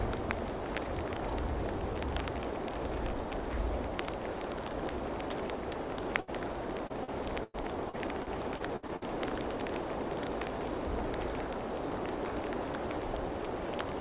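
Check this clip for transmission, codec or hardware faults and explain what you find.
Two transmission faults are present, both from packets lost on the way to the receiver. Throughout, nothing reaches above 4 kHz, which fits a narrowband call codec such as G.711.

Burst of packet loss, 6.20 to 6.29 s: a short run of packets failed to arrive in time, leaving about 80 ms of audio with no data. The receiver bridged the hole by extending the last sound it had for 74 ms and fading it down. You hear a brief held, dimming tone or hiss, then the audio picks up slightly further along with that slice missing.

Repeated packet loss (robotic sound), 6.87 to 9.03 s: over this stretch packets kept dropping out, producing ten separate gaps, the longest 101 ms, about 420 ms lost in total. Each hole was patched by repeating and fading the preceding sound, so roughly a fifth of the span is synthetic fill. 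Because the gaps come in quick succession, the result is choppy, with a robotic, stuttering quality and pieces of the audio missing.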